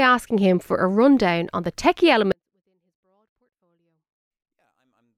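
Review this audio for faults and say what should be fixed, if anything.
From 2.32 s, after "rundown on the techie", to the end, a 24-bit alignment error (too quiet): 24-bit samples read as 32-bit values drop the level about 48 dB. The step is instant and the sound stays clean, unlike a fade or a dropout. Declare the sample format correctly between writer and reader, or shift 24-bit samples into the high bytes before passing them on as 32-bit.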